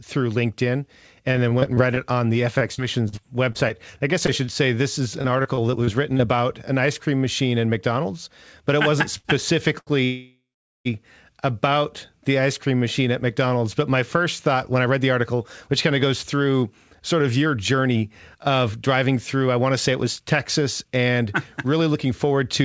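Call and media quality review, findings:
Repeated packet loss (robotic sound), 1.32–1.99 s: choppy, robotic texture. Seven short holes, longest 23 ms, each patched by extending the preceding sound; about 60 ms of audio actually lost. Component: jitter buffer packet-loss concealment.

Repeated packet loss, second burst, 2.59–6.21 s: sixteen gaps, longest 39 ms. About 0.3 s concealed and 0.28 s missing. An intermittent robotic edge runs through the span as concealment keeps stitching over absent packets.

Short stall from a late packet, 9.18–9.27 s: sound held about 70 ms too long, with slight buzz or dip. The jitter buffer ran empty and the receiver stretched the last audio until the packet arrived. It then resumed in place, with nothing lost and playout delay up 70 ms.

Short stall, repeat, 9.79–9.89 s: same signature. Last sound stretched about 81 ms while waiting for a late packet, then continuation from the same point. 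Nothing missing. Delay grows by a further 81 ms.

Call audio freeze, 10.05–10.87 s: the audio hangs for about 0.8 s. The last sound trails into a fading buzz or hiss, followed by roughly 0.44 s of silence, then picks up exactly where it stopped with nothing dropped. Likely cause: packets held up in transit, draining the jitter buffer, with concealment filling the wait. Net effect is a gap inserted plus added latency.

Jitter buffer speed-up, 14.55 s to end of clip: playback runs about 6% fast at unchanged pitch and sounds hurried. The buffer was holding more than its target delay. The receiver repeatedly cut pitch-period-length fragments, roughly half a second removed in total, to bring latency back down.

Throughout, the call codec band-limits the audio, with nothing above 8 kHz, consistent with G.722 wideband.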